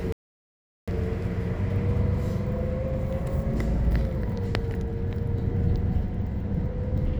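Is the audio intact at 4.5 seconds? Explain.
Yes, at 4.5 seconds the sound is intact, with no dropout, click, distortion or other technical fault at that point.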